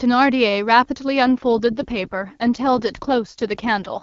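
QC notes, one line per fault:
1.37–4.02 s AMR rate drop: the speech turns rough and synthetic with no gap or band loss, which fits AMR-WB dropping from 23.85 to 8.85 kbit/s.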